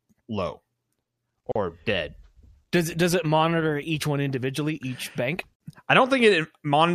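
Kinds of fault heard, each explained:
Gap at a join of encoded pieces: brief silences of 38 and 49 ms, four seconds apart, from encoder padding; unlike a dropout, the sound resumes exactly where it stopped.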